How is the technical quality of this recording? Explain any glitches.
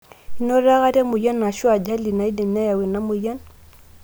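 No glitches are audible anywhere in the recording, so there is nothing to explain.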